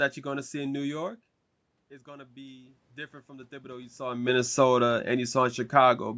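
From 2.03 s to 4.32 s there is automatic gain rising. The speech level reaching the microphone drops by about 18 dB, and the gain control slowly lifts its gain by about 8 dB over those two seconds, so voice and room noise swell up together.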